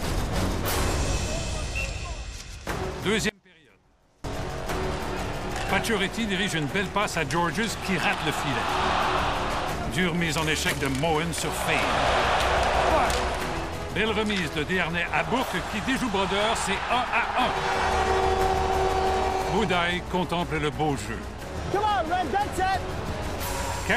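An audio dropout to a faint residue runs from 3.29 s to 4.24 s, about 0.95 s. The sound cuts out abruptly and returns just as sharply, leaving only a faint trace roughly 30 dB down. This is likely a brief loss of the source while the downstream path stayed live.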